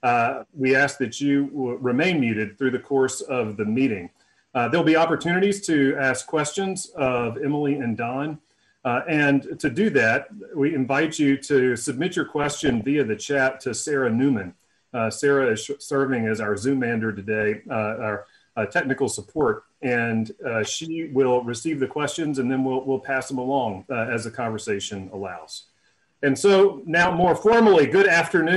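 The audio is dull and granular throughout, with a gurgling roughness as upper bands drop in and out. This is likely MP2 compression at a low rate, plainly audible, and fits roughly 80 kbps. DAB burbling appears at 6.98–7.34, 9.52–9.67, 12.41–12.84, 17.41–17.55, 19.21–19.54 and 26.94–27.53 s. Bit errors, at a fraction of a percent, reached the audio data and put short blips of noise into single sub-bands.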